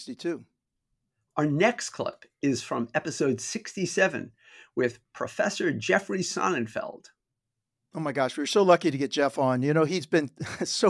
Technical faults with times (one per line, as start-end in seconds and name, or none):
none